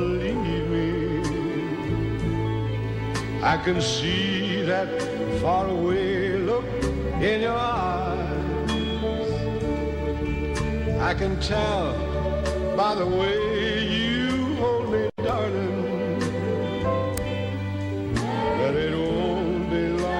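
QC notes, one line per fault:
17.18 s, uninitialised buffer: a playback block was sent to the output before any audio had been written into it, so whatever stale data sat in that memory was played out as if it were samples. The block lasts only about 0.73 ms, which fits a 32-sample buffer, so it is heard as a single sharp, loud click of digital noise rather than a sustained burst.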